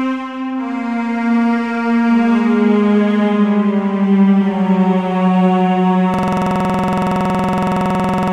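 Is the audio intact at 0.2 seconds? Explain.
Yes, at 0.2 seconds the music plays through intact, with no dropout, click, distortion or other fault at that moment.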